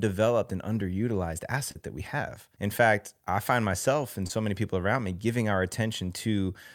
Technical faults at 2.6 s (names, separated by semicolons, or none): none